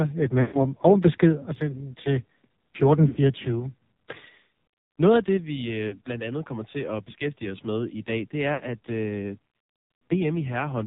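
Throughout, the sound is band-limited and buzzy, the AMR narrowband mobile codec. Nothing passes above 4 kHz. The heavy, synthetic quality points to a low rate near 5.9 kbps. Lost AMR speech frames follow at 0.42 to 0.61 s, 3.08 to 3.18 s, 5.88 to 6.01 s and 8.54 to 8.64 s. The decoder repeats old settings with falling gain, and each gap is drawn out and fades before the sound returns.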